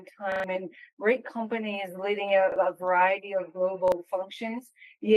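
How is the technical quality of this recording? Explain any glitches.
The recording has three repeated-buffer glitches. At 0.32 to 0.44 s, new audio arrived late and the same 40 ms slice replayed three extra times, with hard joins, producing a brief stutter and dropping about a tenth of a second. Single repeats at 2.52 s and 3.88 s are heard as short stutters.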